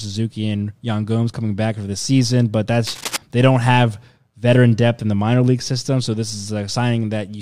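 Between 2.86 and 3.17 s, after "for the season but", cable scratch noise adds dense, uneven crackling roughly 10 dB below the speech, likely from a worn connector being moved.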